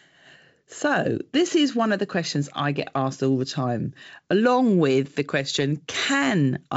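Nothing stood out on listening to this speech, which comes through G.722 wideband telephone coding at 64 kbit/s.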